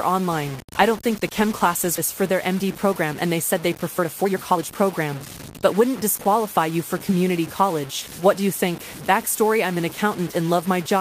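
Through the whole speech clip runs a grainy, rasping distortion that rises and falls with the voice. Quiet syllables and word tails turn gritty or break up, and the error sits only about 15 dB below the signal. This is most likely low bit depth without dither: the samples appear truncated to something like 6 bits with no added noise to decorrelate the rounding error. Unlike steady background hiss or a codec's swirl, the grit is tied to the signal itself and vanishes with it.

At 1.97 s, right after "chem classes", playback skips ahead. About a second and a half of speech is gone, and the two sides are butted together with no silence or fill. Later audio was already queued, and the missing stretch was discarded to catch up. What separates this from a dropout is that nothing stalls or goes quiet. The sound jumps forward abruptly, like a splice.

From 2.21 to 5.16 s a jitter buffer speed-up sets in. 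The speech runs about 16% fast while keeping its normal pitch, so it sounds rushed rather than chipmunk-like. Roughly half a second in total is trimmed by repeatedly cutting out pitch-period-sized pieces to shrink an overfilled buffer. A milder pass follows from 5.66 to 7.70 s at about 105%, removing around a tenth of a second. Because the pitch holds steady, this is time compression, not a resampling or clock error.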